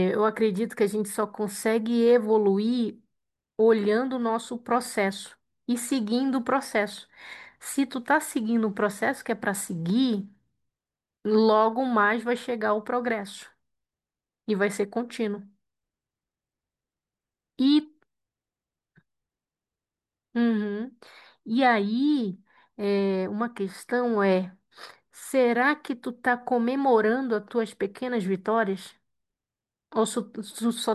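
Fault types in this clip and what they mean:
No faults are audible anywhere in the recording.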